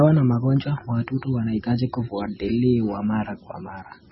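From start to finish the speech has a hard ceiling at 5.6 kHz, with nothing above it, and a watery, swirling texture underneath. This is likely MP3 compression at a very low bitrate, which fits something near 16 kbps. Short of bits, the encoder cuts the treble at a fixed point and drops weaker frequency lines that flicker in and out between frames. The damage is heavy: sibilants lose their edge and gain metallic chirps, and consonant onsets smear.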